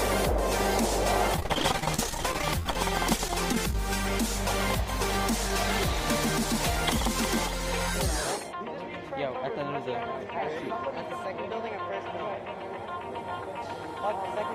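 From 1.36 to 3.75 s there is repeated packet loss with a robotic sound. Dozens of short holes, the longest about 36 ms, are patched by stretching the preceding sound, concealing a fifth of the stretch. It sounds choppy, with pieces missing. A spectrogram shows smeared, repeated frames alternating with gaps.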